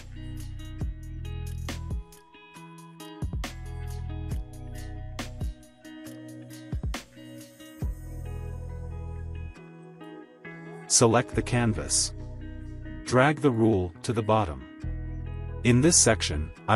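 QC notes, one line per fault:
No fault found, so there is nothing to log in the QC notes.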